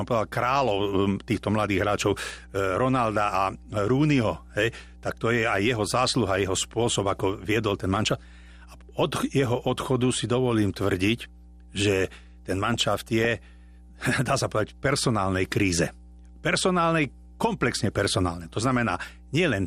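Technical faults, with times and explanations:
Throughout, mains hum: a steady 60 Hz tone with low harmonics sits under the speech at about 25 dB below the signal, the signature of a ground loop or nearby transformer coupling the power line into the audio path.
Throughout, MP2 compression: the speech sounds dull with a gurgling, granular edge as upper sub-bands drop out and flicker while the remaining bands are coarsely quantised. The damage is plainly audible and likely comes from a low-rate Layer II encode, consistent with about 80 kbps.
12.64 to 13.25 s, DAB burbling: for roughly 0.6 s the audio is broken by short blips of noise in single sub-bands. This fits bit errors slipping past error correction into the MP2 data, corrupting samples and scale factors.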